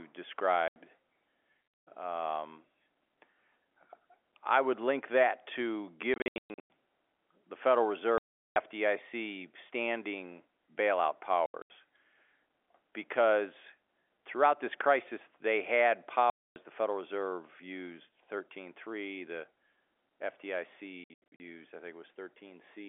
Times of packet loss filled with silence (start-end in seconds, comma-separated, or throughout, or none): 0.68-0.76, 6.14-6.70, 8.18-8.56, 11.46-11.70, 16.30-16.56, 21.04-21.40